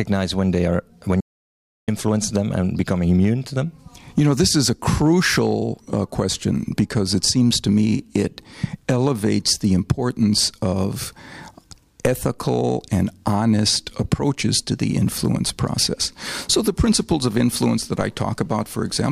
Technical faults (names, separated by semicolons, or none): audio dropout to silence